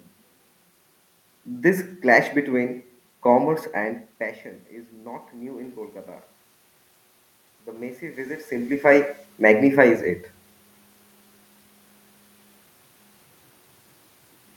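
Speech recorded with room noise underneath. From 7.64 to 8.8 s the automatic gain is rising. The input fell by about 17 dB, so the gain control lifted level by about 4 dB gradually, swelling voice and background together. The level changes around 4 s and 8.5 s come from the talker moving relative to the microphone.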